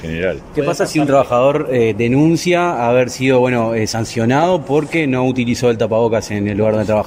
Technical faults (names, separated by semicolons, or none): none